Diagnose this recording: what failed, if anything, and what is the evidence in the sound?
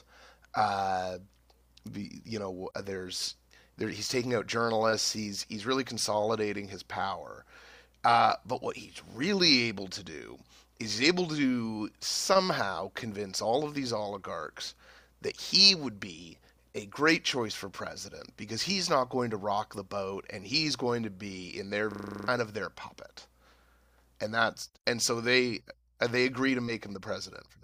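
System hang loop at the driver stage, 21.92 to 22.28 s. A frozen driver let hardware replay one 40 ms buffer nine times: a 25 Hz buzz.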